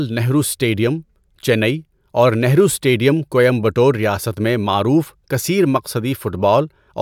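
Nothing technical goes wrong anywhere in this bit of speech, so there's nothing to flag here.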